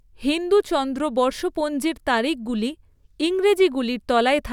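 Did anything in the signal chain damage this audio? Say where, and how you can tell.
No, nothing along the chain seems to have touched this speech recording, and there's no sign of damage at any stage.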